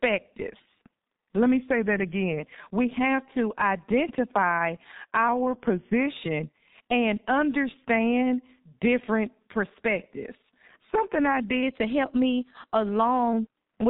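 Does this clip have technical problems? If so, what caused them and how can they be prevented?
Yes. The whole clip carries G.723.1 codec damage. Nothing passes above 3.8 kHz, so the speech sounds muffled and hoarse. The thin, smeared consonants fit a very low bitrate near 6 kbit/s. Prevent it by using a wideband codec at a higher bitrate.

Two drift correction steps are audible. From 1.70 to 2.40 s the audio slows by 6.08% and drops about a semitone. From 11.63 to 13.33 s it speeds up by 6.08% and rises about a semitone. The likely cause is clock-matching software changing the playback rate in one jump to correct its buffer. Prevent it with gradual, small rate adjustments or a shared clock.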